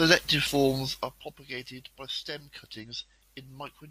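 A short blip at 0.47 s, and a longer disturbance from 2.79 to 2.85 s, come from damaged data in the compressed stream. The decoder misreads corrupted frames, loses sync and jumps to the next frame header it finds. From 0.67 to 1.35 s a fine ticking, zipping texture rides on the speech as the level falls by roughly 15 dB. This is zipper noise: the gain moves in unsmoothed steps, around fifty a second, each leaving a tiny click.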